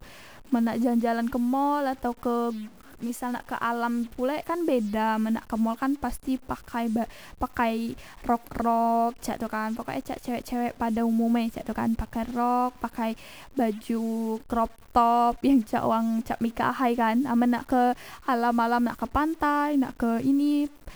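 It's a speech clip with grainy noise running right through it, pauses included. That's the signature of a stuck bit, with a step somewhere around -45 dBFS, likely from a broken data line or converter.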